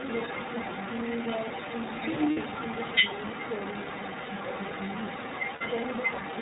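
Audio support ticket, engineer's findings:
iLBC codec, whole clip: band-limited at 4 kHz, rough, slightly synthetic texture throughout, plainly audible. Each frame's excitation coded independently. The grain fits 30 ms frames at the 13.33 kbps mode. Steady and uniform, unlike the localised dropouts below.

Other side's voice leaking through, 0 to 6.4 s: second voice present for the whole clip at roughly the main talker's level. Likely cause is residual acoustic echo from the loudspeaker path that the canceller did not remove. A separate talker, not codec distortion.

Lost iLBC frames, 2.31 to 2.38 s and 5.54 to 5.62 s: about 60 ms each of held, buzzy vowel-like sound. Decoder concealment repeats the last pitch cycle mixed with noise, which fits two 30 ms frames. Clean recovery immediately afterwards, unlike a clipped or muted gap.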